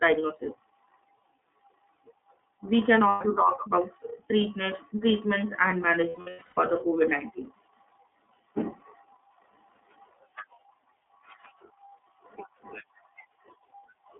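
iLBC codec, throughout: the speech is confined to a band of about 150 Hz to 3.5 kHz and sounds plainly rough and synthetic. Each 30 ms frame's excitation is coded on its own, which fits iLBC's 13.33 kbps mode.

Lost iLBC frames, at 3.09 to 3.22 s and 6.09 to 6.58 s: at the first spot, 120 ms of audio is missing, which points to four lost frames. The second loss comes just after "treatments treatments and". There, about 390 ms is missing in scattered gaps across 480 ms, the longest run lasting about a tenth of a second. The decoder fills each gap by repeating the last pitch cycle mixed with noise, so it sounds like a held, buzzy vowel. The speech is clear again almost at once.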